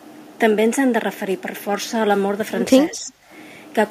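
A speech recording whose level sinks by roughly 10 dB from 2.91 to 3.12 s, seen as a brief waveform notch, likely speech suppressed in double talk by an echo canceller.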